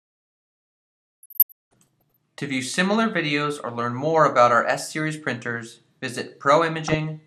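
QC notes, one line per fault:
1.23–2.01 s and 6.86–7.05 s, DAB burbling: weak reception let bit errors, around half a percent, slip past error correction into the MP2 data. Corrupted samples and scale factors make individual sub-bands blip and jump in level, giving that watery, bubbling burble.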